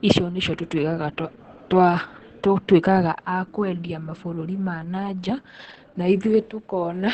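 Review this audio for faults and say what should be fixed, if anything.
The whole clip has heavy Opus voice compression. Nothing survives above about 8.4 kHz, so the speech sounds muffled, and the coarse excitation coding in SILK mode makes it hoarse and a bit robotic, which fits a bitrate around 10 kbps. To prevent it, encode at a higher bitrate or keep an uncompressed copy for review.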